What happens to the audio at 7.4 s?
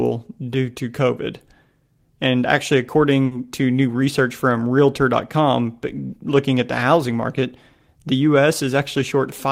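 Nothing goes wrong at 7.4 s; the speech carries on intact through that moment, with no dropout, click or distortion.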